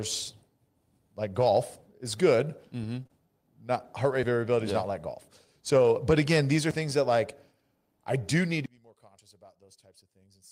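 At 1.41 to 1.43 s, just before "is good", a 20 ms stretch turns rougher and noisier without any gap. This is a lost packet rebuilt from error correction: the next packet carried a low-bitrate copy, and the decoder played that copy in place of the original.

From 3.03 to 3.11 s the sound briefly smears and wobbles. Two consecutive 20 ms packets went missing, a short concealed packet loss. The receiver extended the preceding sound across the hole, filling roughly 15 and 24 ms, then blended back into the real signal.

At 5.83 to 5.85 s, between "yeah not like golf" and "but again these are", another 20 ms patch sounds coarser and noisier but stays continuous. This is a second single packet rebuilt from its lower-quality error-correction copy.

From 8.66 s, right after "I do need to", to the end, the audio drops by about 27 dB and only a faint residue remains. The likely cause is one channel inverted, so the shared content cancels when the two channels are summed to mono.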